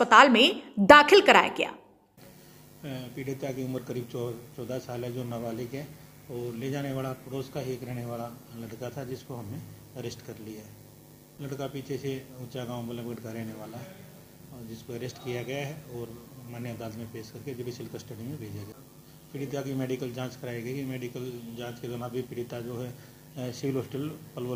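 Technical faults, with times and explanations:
6.9 to 10.5 s, call bitrate drop: the sound turns rough and muffled as the bitrate falls from 128 to 28 kbps. That fits the encoder coding coarsely and losing highs for about 1.3 s.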